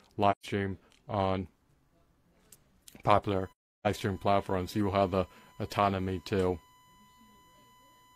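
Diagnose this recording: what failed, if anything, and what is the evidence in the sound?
Lost AAC frames were muted by the decoder: soft-edged gaps at 0.31–0.46 s (128 ms) and 3.52–3.87 s (341 ms), faded through the overlapping windows. This is AAC frame loss with muting.

USB whine in the analogue power or ground path: 1 ms bus frames leak in as a steady 1 kHz tone, roughly 35 dB below the speech, from 3.30 s to the end.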